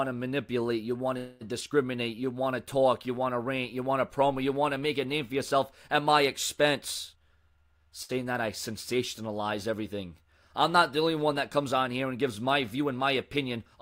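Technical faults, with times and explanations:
1.17 to 1.43 s, call audio freeze: the sound stops moving forward for about a quarter of a second, and the last bit of audio carries on as a fading buzzy smear instead of going quiet. The likely cause is packets held up in transit, so the jitter buffer ran dry and the receiver had to fill about 231 ms on its own. When the audio resumes, it picks up exactly where it left off. Nothing is lost, but everything after this point now plays about 231 ms later.
1.61 s, skip ahead: the audio lurches forward here. Around 70 ms of material is simply gone, and the two sides of the cut are butted together with only a tiny fill of about 4 ms, so it sounds like a clipped jump rather than a gap. This happens when a chunk gets dropped while later audio is already queued up. Playback jumps on to that later audio and wins back roughly 50 ms of the delay added just before.
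1.95 to 2.52 s, jitter buffer slow-down: for just over half a second the sound drags, running at about 90% speed with no change in pitch. The receiver is rebuilding a reserve in its buffer by repeating single pitch periods and slivers of pause over and over. Together those repeats add about 65 ms, which you hear as slightly drawn-out sounds.
7.12 to 7.87 s, jitter buffer speed-up: this is the opposite move. For about three-quarters of a second the audio rushes along at roughly 126% speed while the pitch stays put, so it comes across as hurried. The buffer was holding more than it wanted, so the receiver trimmed out many short pieces, each one or a few pitch periods long. That adds up to around 200 ms shaved off to bring the delay back down.
8.03 to 8.11 s, short stall from a late packet: a packet wasn't there when it was due, so the receiver held the current sound for about 63 ms until the packet arrived. 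You hear one sound hang on a touch too long, with a slight buzz or dip, before playback carries on from the same point. Nothing is missing, and the overall delay grows by about 63 ms.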